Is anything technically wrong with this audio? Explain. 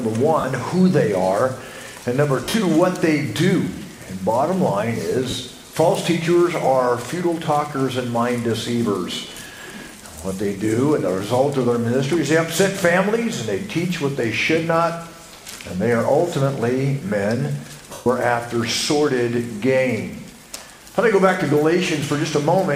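Yes. The audio has lost LE Audio frames at five points: 0.40–0.44 s, 2.44–2.54 s, 5.30–5.33 s, 9.47–9.50 s and 17.93–18.06 s. The gaps last 40, 90, 30, 30 and 130 ms, which fits 10 ms frames. The 2.44 s loss is scattered across about 100 ms, with its longest run near 50 ms.

For each missing frame, the LC3 decoder rebuilt the audio from the last good spectrum with randomised signs. The sound therefore turns briefly into a noisy, hissy smear. In the 130 ms gap, that smear fades toward silence.

This is different from a plain dropout, which would cut to abrupt silence with a click at each edge. It is also different from waveform-repeat concealment, which produces a buzzy, stuttering echo of the previous sound.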